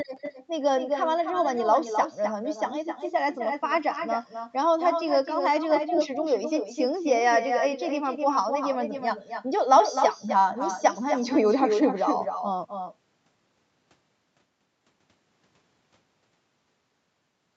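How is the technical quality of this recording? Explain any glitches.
The recording has one clear fault, and it runs throughout. Echo with no canceller: the far end's loudspeaker feeds its microphone, so every phrase returns about a third of a second later. The echo sits about 7 dB below the speech and sounds thinner. The call path limits the audio to nothing above 8 kHz.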